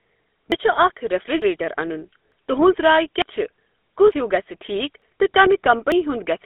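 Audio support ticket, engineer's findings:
GSM full-rate codec, whole clip. Buzzy, gravelly roughness on the speech. Band limited to roughly 250 Hz to 3.6 kHz, nothing above 3.8 kHz. Consistent with GSM full rate at 13 kbps. Mechanism: vocal-tract model driven by regularly spaced pulses, excitation kept at one sample in three. Roughness plainly audible. Upper band lost entirely.

Audio missing between chunks. Seven skips at 0.52, 1.42, 2.32, 3.22, 4.12, 5.02 and 5.92 s. Regular spacing, 0.9 s apart. Each drops about a tenth of a second. Sides joined with no silence. Likely cause: recorder or processor working in 1 s chunks and losing audio at each chunk changeover.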